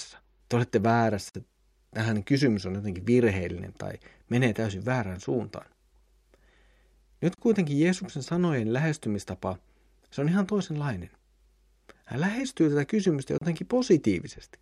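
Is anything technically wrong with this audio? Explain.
Yes. The speech has a gap at a join of encoded pieces, recurring every 6 s: at 1.29 to 1.35 s (52 ms), 7.35 to 7.38 s (34 ms) and 13.38 to 13.41 s (34 ms). The audio appears to have been encoded in separate chunks and concatenated untrimmed, so each encoder's start-up delay and final-frame padding remain as silence. The sound drops out with smeared edges, then resumes exactly where it stopped.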